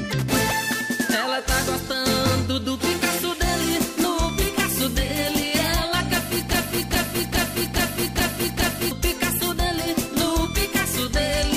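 A broken-record loop runs from 6.53 to 8.91 s: a 416 ms fragment repeats exactly, back to back, six times. The player or stream likely stalled and kept resending the last piece it held, so the sound that belonged in that span is lost.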